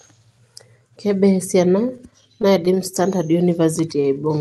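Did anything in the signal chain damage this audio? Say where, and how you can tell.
Yes. Repeated stalls (stutter) at the network jitter buffer, from 1.88 to 2.97 s: eleven short gaps, none over 13 ms, patched by continuing the last sound. The waveform shows tiny repeated cycles. Nothing is lost, but the sound stumbles.

Jitter buffer slow-down, from 3.17 to 4.39 s: the receiver repeated pitch periods to rebuild its reserve, adding 87 ms and playing at 93% speed. On a spectrogram the harmonics stretch sideways at unchanged frequency.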